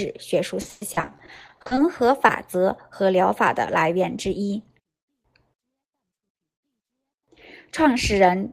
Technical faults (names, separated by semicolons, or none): repeated packet loss (robotic sound); jitter buffer slow-down; short concealed packet loss; jitter buffer speed-up